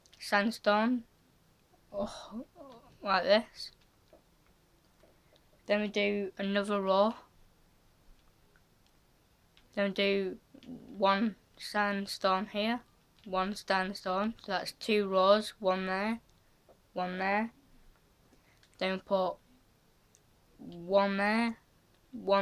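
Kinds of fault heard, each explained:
No audible faults were found.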